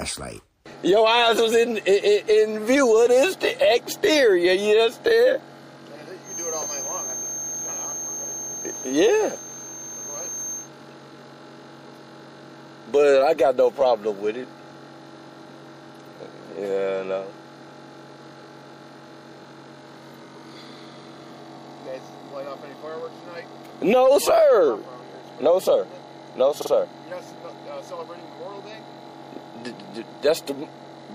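From start to finish the audio carries plainly audible MP3 compression damage. The quieter detail has a watery, swirling quality as weak frequency components drop in and out from one frame to the next. This is most likely an MP3 encode at a low bitrate, and the character fits roughly 64 kbps. At that rate the encoder runs short of bits and discards whatever its hearing model ranks as least important.

Between 6.21 and 10.70 s, a thin steady whistle at 6.4 kHz sits behind the sound, roughly 10 dB below it, swelling and fading slowly in level for about 4.5 s. This is a feedback whistle, heard as a single high pitch that rings on but never builds into a full howl. The likely cause is a loudspeaker-to-microphone loop running just under the point of instability.

At 26.61 to 26.70 s the sound stutters as a short 48 ms block plays two extra times. These are repeated frames: a stretch of compressed data was written or delivered more than once, and the decoder replayed it each time. 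The pattern fits two frames being duplicated. Each extra pass lengthens the audio, adding 96 ms in total and pushing everything after that point slightly later.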